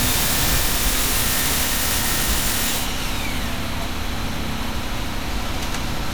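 Throughout the sound there is a swirly, hollow smear, with transients blurred and nothing above about 20.9 kHz. This is likely generation loss: around seven rounds of MP3 decoding and re-encoding, consistent with 128 kbit/s, each adding fresh quantisation noise and spectral holes.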